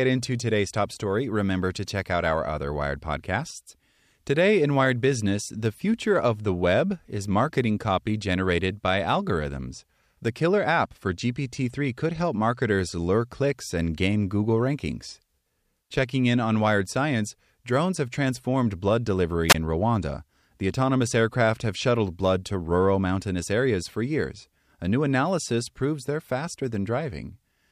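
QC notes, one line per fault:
10.54–12.70 s, channel delay (comb filtering): one channel runs late by roughly a single sample, around 0.02 ms, and the two are summed to mono. Material common to both cancels at regularly spaced frequencies, but with so small an offset the first notch sits up near 20 kHz. The result is a slight dulling and loss of air at the very top of the band rather than an obvious hollow, phasey colour.
19.48–19.55 s, wireless microphone squelch dropout: the analogue FM link's radio signal fades far enough that the receiver's squelch gate closes and mutes the output for about 21 ms. This leaves a short hole of near silence in the speech before the signal recovers and the gate reopens. The mute is brief, so it reads as a brief gap in the audio rather than a long break.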